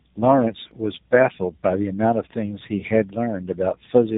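Speech runs its whole length rough, muffled and warbling, with nothing above about 3.8 kHz, so it has the narrow telephone band and a grainy, smeared texture beyond what a single phone codec leaves. This is tandem speech coding. The call appears to have crossed two low-rate speech coders in a row, consistent with G.729A at 8 kbit/s and then AMR-NB at 12.2 kbit/s, joined through a G.711 link. Each coder re-encoded the previous one's already damaged output, so the artefacts compound.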